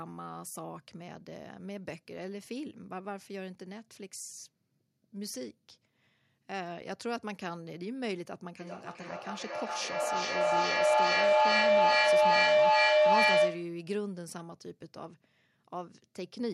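From 8.6 s to 13.87 s a feedback howl builds up. Two devices in the same room are joined on the call, so sound travels from loudspeaker to microphone and back with more gain on every pass. Each repeat gets louder and narrower until a tone near 700 Hz dominates, peaking about 14 dB above the speech and pulsing roughly every 0.4 s. Ordinary echo repeats fade away, but these grow until the loop is broken.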